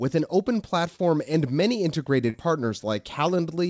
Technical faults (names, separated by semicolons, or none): short concealed packet loss